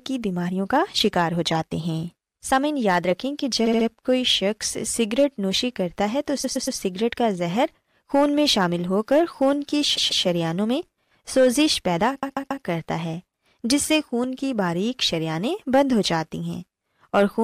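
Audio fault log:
3.65–3.86 s, 6.43–6.78 s, 9.96–10.24 s, 12.22–12.63 s: repeated frames. A block of compressed speech plays again and again: 70 ms three extra times, 116 ms three times, 139 ms twice, then 139 ms three times. Each repeat stutters and lengthens the clip.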